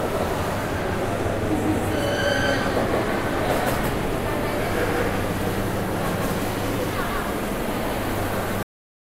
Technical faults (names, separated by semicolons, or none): doubled audio track; cut-off end